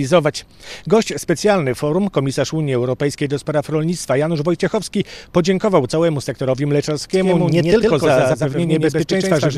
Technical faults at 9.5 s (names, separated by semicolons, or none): doubled audio track